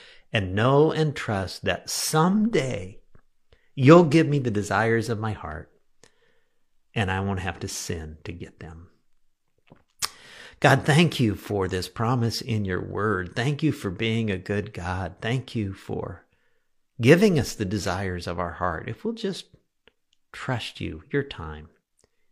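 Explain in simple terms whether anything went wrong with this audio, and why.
Nothing went wrong with this recording; it is speech, and no technical fault can be heard anywhere in it. There are no dropouts, interruptions or glitches to point to at any moment.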